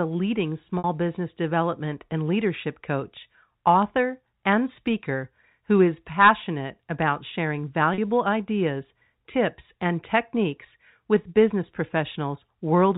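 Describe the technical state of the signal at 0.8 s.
Just before "business development and leadership", from 0.78 to 0.84 s, the sound stops moving forward and a short buzzy tone hangs in its place, dying away before the speech returns with a brief cross-fade. This is packet loss with pitch repetition. About 60 ms of audio went missing, which fits three 20 ms packets, and the receiver filled the gap by looping the last pitch period and fading it out. The surrounding G.711 telephone band, capped at 4 kHz, carries on around the gap.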